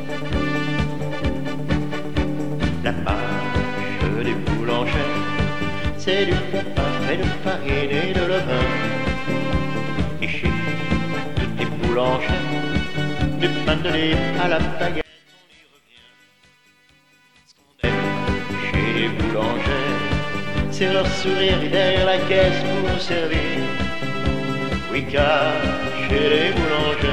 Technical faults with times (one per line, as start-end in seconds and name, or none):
15.01-17.84 one channel inverted